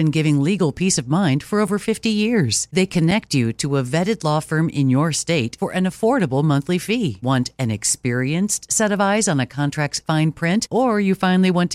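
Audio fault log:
1.68 s and 3.11 s, block of digital silence: a block of samples was zeroed, each gap about 5.3 ms long, which fits a 256-sample buffer. The audio drops to silence and returns with no fade, and the gap is heard as a brief tick. The first follows "peace of mind for", and the second comes just before "you to a vetted".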